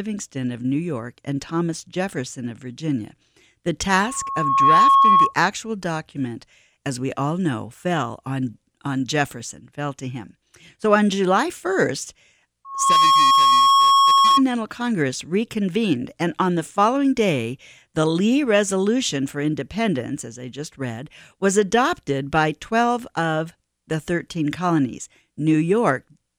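A single 1.1 kHz tone swells out of the speech from 3.89 to 5.34 s, rising over most of a second to sit about 10 dB above it, and again from 12.65 to 14.43 s, building faster. This is loudspeaker feedback squeal: the microphone re-amplified its own loudspeaker until that frequency ran away.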